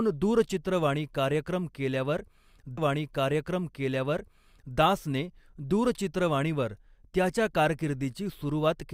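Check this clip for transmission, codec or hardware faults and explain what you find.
One transmission fault is present. From 2.77 to 4.77 s a stream segment is repeated: the player queued the same two seconds of speech twice, so that stretch replays after a small blip at the jump back. On the waveform and spectrogram, an identical two-second block appears twice in succession.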